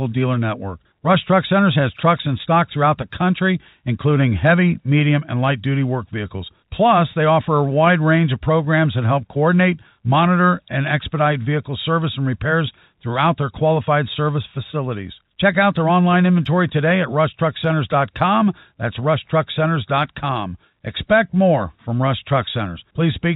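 No technical faults can be heard in the speech, which carries the narrow, telephone-band character of G.711 coding and nothing else.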